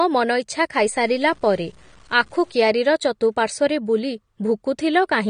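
Throughout the clip, the speech has most likely passed through low-bitrate AAC compression, consistent with AAC-LC at around 32 kbps. The encoder had too few bits for the full spectrum, so it removed everything above about 9.7 kHz and coarsely quantised what remained. The result is plainly audible: the speech sounds dull and smeared, sibilants lose their edge and turn fizzy, and sustained sounds carry a warbling texture.

From 0.78 s to 2.55 s there is a second fault, low bit depth without dither. The samples were likely truncated to what sounds like about 8 bits with no added dither, so the rounding error tracks the signal instead of spreading out as steady hiss. It sits some 35 dB below the speech and comes across as grainy distortion that shifts with each sound. It roughens the quieter passages and then ends at 2.55 s.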